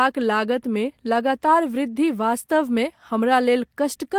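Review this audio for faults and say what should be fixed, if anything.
Nothing to fix: no faults are audible anywhere in the speech.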